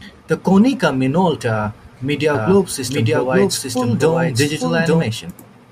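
From 2.34 s to 5.02 s the speech turns into a doubled audio track: a second, equally loud copy trails about a second behind, dry and full-band, switching in and out abruptly. It's likely a slower capture path or an edit left two copies misaligned.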